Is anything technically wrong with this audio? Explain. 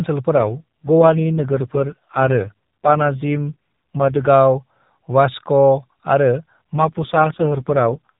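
Yes. There are two AMR rate drops, at 0.36 to 4.28 s and 6.74 to 8.10 s. The speech turns buzzy and synthetic, which fits the mobile codec stepping down to 4.75 kbps to protect a weak link. The band stays the same and there is no gap. Between the drops it sounds like the usual 12.2 kbps narrowband call.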